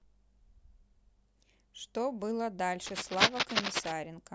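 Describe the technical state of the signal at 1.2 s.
At 1.2 s the speech signal is intact, with no dropout, clipping, glitch or other technical fault audible at that moment.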